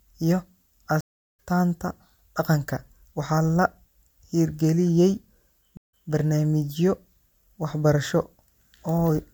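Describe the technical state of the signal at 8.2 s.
At 8.2 s the speech signal is intact, with no audible technical fault at that moment.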